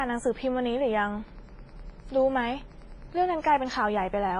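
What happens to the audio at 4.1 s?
At 4.1 s you're hearing two faults that run through the whole clip, so nothing starts or stops there. First is Wi-Fi interference: a nearby radio's signal gets rectified by the audio circuit. You get a steady tick every 102.4 ms, about ten times a second, from the beacon, plus rougher rasps when data bursts through. It sits well under the speech, roughly 35 dB down.

Second, the speech itself sounds washy and ringing. The hiss rises and falls with the signal, transients smear over tens of milliseconds, and nothing comes through above 10.5 kHz. That's likely WMA compression, and heavy-handed at that, which fits a low bitrate around 24 kbps. Its long transform blocks spread quantisation noise around each sound, and the weaker spectral detail gets zeroed out.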